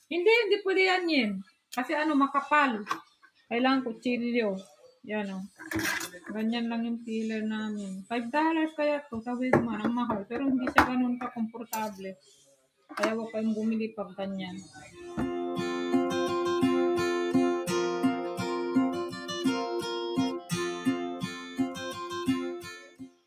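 A noise suppressor built for speech has been left running on this material, and you can hear it working the whole way through: held and decaying parts keep getting pulled down while sharp onsets slip past, so the level swings by around 10 dB and the sound pumps and thins out. It's treating steady tone and tails as if they were background noise.

Sound cut by the noise suppressor shows up as distinct dips on top of that. The first come at 1.43 to 1.74 s, 3.02 to 3.51 s and 4.63 to 5.06 s, each sinking by about 20 dB. Then there's a short one at 11.51 to 11.73 s, about 16 dB down, followed by a full second from 11.92 to 12.94 s at about 20 dB. Lighter dips at 14.62 to 15.0 s and 19.05 to 19.45 s lose only about 10 dB and 8 dB. The worst runs from 20.04 s to the end, roughly three seconds at up to about 21 dB down.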